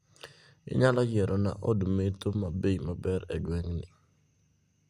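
Nothing in the speech recording points to a technical fault, and the signal stays intact and stable throughout with no audible defect anywhere.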